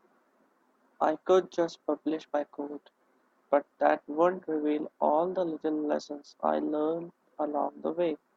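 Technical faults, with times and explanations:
No technical faults are audible anywhere in this recording.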